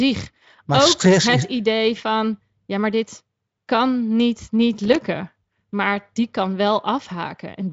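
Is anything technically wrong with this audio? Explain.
Yes. From 4.81 to 5.06 s, just after "dit kan niet niet", there is loose connector crackle: a worn contact intermittently breaking the signal path, heard as an irregular burst of scratchy crackle.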